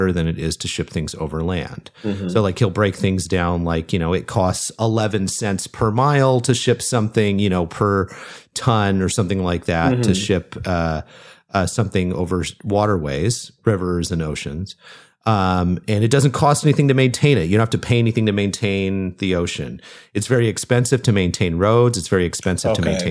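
Speech recording, no audible technical faults found.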